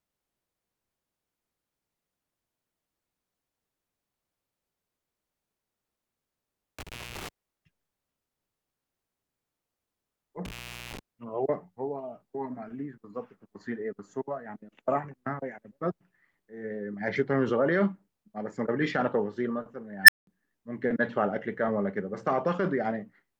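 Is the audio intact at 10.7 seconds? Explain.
No. At 10.7 s the speech sits inside an intermittent contact fault running from 10.45 to 10.99 s. A loose plug or cable opens the line for about 0.40 s, leaving faint hiss in the gap. Unlike a digital dropout, the cut has crackle at both edges.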